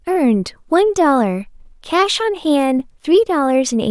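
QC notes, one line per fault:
No faults found in this speech recording. Nothing calls for a note.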